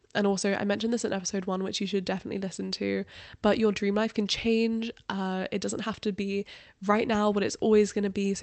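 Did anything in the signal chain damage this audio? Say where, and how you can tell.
No, nothing in the signal chain damaged this audio.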